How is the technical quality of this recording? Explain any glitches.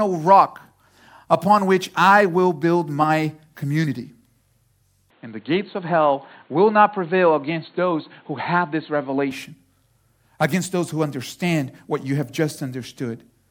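There's one clear glitch. From 5.10 to 9.31 s the speech suddenly goes dull and boxy, then opens back up. That stretch has nothing above 4.3 kHz, so the top end is simply gone. It most likely comes from the input switching to a poorer device, such as another mic or a headset's call mode with a narrower band. There's no gap at either switch and the level barely moves, but a faint new background noise comes in, roughly 35 dB under the speech.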